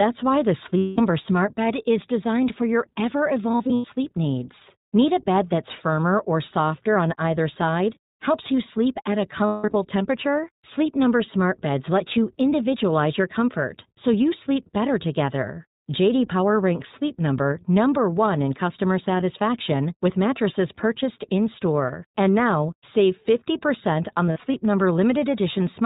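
Throughout, the speech carries the iLBC codec's narrowband sound. Nothing passes above 4 kHz, so a spectrogram shows a flat ceiling there, and the voice is slightly rough and synthetic. The plainly audible damage points to the 15.2 kbps mode with 20 ms frames.

Lost iLBC frames occur at 0.78–1.00 s, 3.52–3.87 s, 9.46–9.75 s and 24.27–24.56 s, totalling about 200, 200, 240 and 140 ms. The decoder repeats the last pitch cycle mixed with noise, which sounds like a held, buzzy vowel. A spectrogram shows frozen harmonic striping, and the waveform shows repeating cycles. The later gaps are scattered in short runs, the longest at 9.46 s. Each recovers almost immediately.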